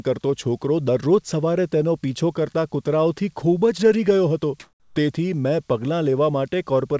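From 4.60 to 4.96 s, just after "ગયો હતો", the real background gives way to comfort noise for about 360 ms. The sender likely stopped transmitting during the pause, and the receiver filled it with synthetic noise. The background, already about 43 dB below the loud parts, shifts in level by about 10 dB and turns steady and featureless. On a spectrogram the patch shows as a flat, smooth band capped at 8 kHz like the rest of the G.722 call audio, and the waveform shows an even noise floor without the original texture.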